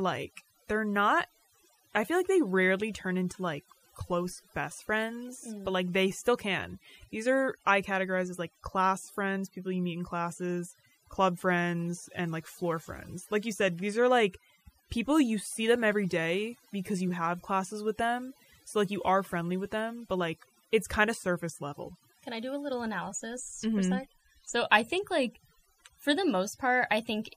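A speech recording with overdone noise removal running the whole way through. Whatever cleaned up the noise floor was pushed much too hard, so individual frequency bands get pulled right down whenever they sit close to what it thinks is noise. The gaps end up near-silent with little twinkly specks, and the quieter parts of the voice get eaten too.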